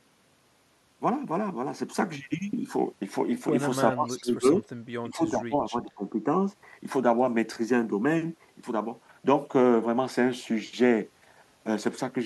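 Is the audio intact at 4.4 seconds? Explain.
No. From 3.92 to 4.66 s the speech dips sharply, by roughly 20 dB: speech suppressed in double talk, likely an echo canceller turning down overlapping talk.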